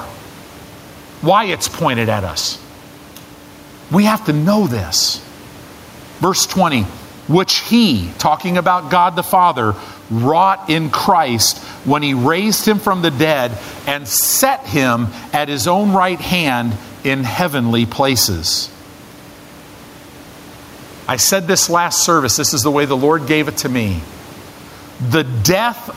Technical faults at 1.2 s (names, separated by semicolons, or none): gain pumping